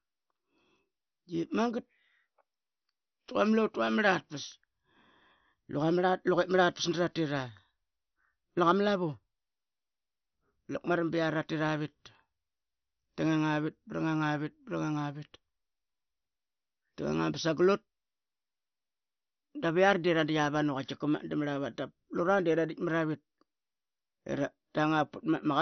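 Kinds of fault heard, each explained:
MP2 compression: likely an MPEG Layer II encoder starved of bits, fitting a 48 kbps stream, dropping everything above 6.1 kHz and leaving the speech dull, heavily gurgling and granular.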